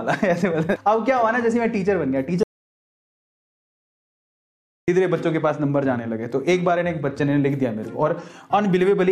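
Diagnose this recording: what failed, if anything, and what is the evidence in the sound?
The sound cuts out abruptly at 2.43 s and returns just as suddenly at 4.88 s, an audio dropout to silence lasting about 2.45 s. The gap holds silence with no room tone or noise floor, which points upstream of storage: the input signal was most likely lost at the device or link while the recorder kept writing silence. On a waveform this is a flat line; on a spectrogram, a dark vertical band with hard edges.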